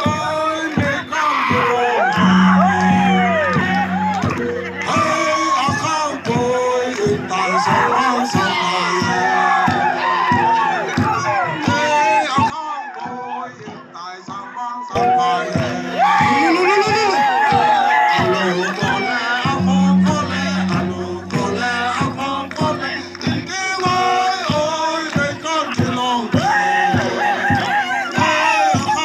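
From 12.5 s to 14.95 s, the sound turns dull and boxy. Nothing above about 7.3 kHz survives. The level drops by roughly 10 dB, and a faint new noise floor appears. There is no gap at either switch. The likely cause is an input switched to a poorer device.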